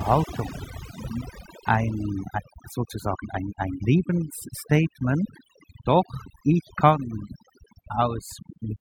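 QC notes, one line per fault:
Throughout: overdone noise removal. The background has been pushed down unevenly and breaks into twinkling, warbling specks. Noise reduction set too aggressively is cutting individual frequency bands whenever their level sits near its noise estimate, so weak speech detail is removed along with the noise. Unlike codec artefacts, the damage follows the noise floor, concentrated where the signal approaches the background level.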